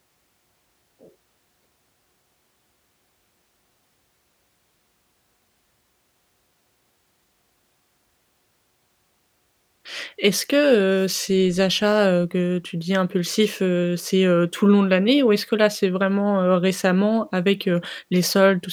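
No audible technical faults.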